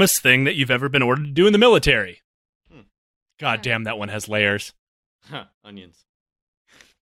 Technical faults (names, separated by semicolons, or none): none